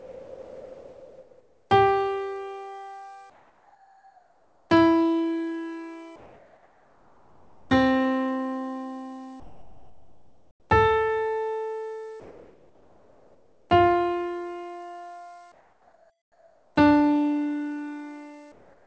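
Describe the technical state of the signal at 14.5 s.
At 14.5 s the sound comes through intact, with no fault present, only the normal bandwidth limit of the call path, which passes nothing above 8 kHz, consistent with a G.722 codec at 64 kbps.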